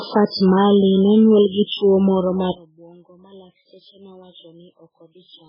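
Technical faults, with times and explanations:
Throughout, MP3 compression: the speech is heavily damaged, with nothing above 5.3 kHz and a watery, swirling texture as weak frequency lines drop in and out between frames. That flicker, not just missing treble, sets it apart from plain low-pass filtering, and likely comes from an extremely low bitrate, around 8 kbps.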